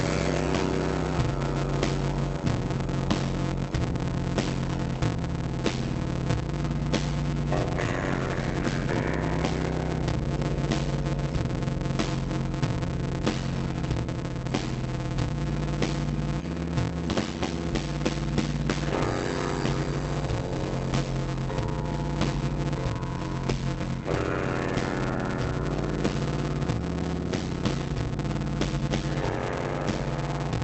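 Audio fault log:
throughout: block size mismatch (padded). A steady buzz at 91.9 Hz sits under the whole clip, and the audio runs at 0.533 times normal speed while keeping about its normal pitch. One stage delivers shorter blocks than the next stage consumes, and the remainder of each block is zero-filled. The pattern fits 256-sample blocks padded out to roughly 480. The silent gap repeating at the block rate produces the buzz, and the padding stretches the timeline. The Opus call path also limits the bandwidth to 8 kHz.
7.63–7.65 s: skip ahead. Playback jumps forward with no fill inserted, and the join lasts about 20 ms. Roughly a second of audio is missing. Later audio was already queued, so the dropped stretch was discarded and the two sides were spliced nearly directly. The result is an abrupt discontinuity in the material rather than a silence. The skip also takes about a second out of the playout delay.
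7.69–9.51 s: jitter buffer speed-up. Immediately after the skip, the audio runs at about 118% speed for just under two seconds at unchanged pitch, and it sounds hurried. The receiver was holding more audio than its target and trimmed it back by repeatedly removing short pitch-period-length segments. Together these cuts add up to around a third of a second. Pitch is preserved because whole periods are removed, while the timing is compressed.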